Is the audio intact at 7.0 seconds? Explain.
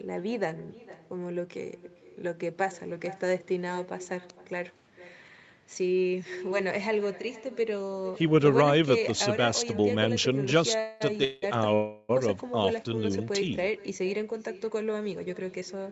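No. At 7.0 seconds, as throughout the clip, there is echo with no canceller: the far end's loudspeaker feeds its microphone and nothing removes it, so the speech returns about half a second later, about 18 dB down, as a thin shadow within the 8 kHz call band.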